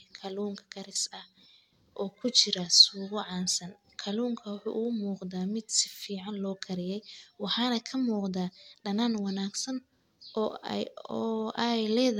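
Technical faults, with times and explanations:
Throughout, generation loss: the speech sounds swirly, hollow and smeared, with softened consonant attacks. This is more damage than one encode at about 96 kbit/s AAC would leave, which points to likely repeated lossy re-encoding, roughly three passes, each adding fresh quantisation noise on a shifted frame grid.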